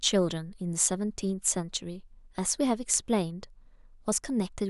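No technical faults can be heard anywhere in the speech recording, which stays continuous and steady throughout.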